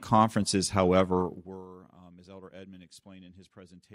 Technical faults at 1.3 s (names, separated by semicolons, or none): zipper noise